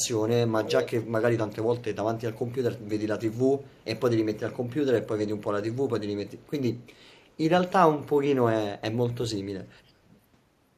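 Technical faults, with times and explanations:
0.63–1.02 s, 3.71–3.84 s, 6.43–6.47 s and 6.81–7.01 s: echo leak. A delayed copy of the speech comes back, 396 ms late in the first two bursts and 427 ms late in the last two. The first burst is nearly as loud as the speech itself. The later ones are very faint scraps. The likely cause is a loudspeaker at the far end whose echo canceller missed part of what its microphone picked up and sent it back.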